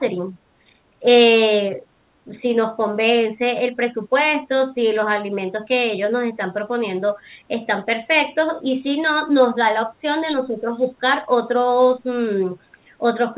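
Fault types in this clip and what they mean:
Background gated by the echo canceller: the canceller clamped the microphone during loudspeaker playback, dipping room sound about 10 dB for roughly a fifth of a second.
Speech suppressed in double talk: the speech briefly dips, by up to around 10 dB, in four short patches, likely where both sides talked at once.
Echo leak: a faint copy of the speech, around 25 dB down and delayed 231 ms, follows briefly, likely echo the far-end canceller missed.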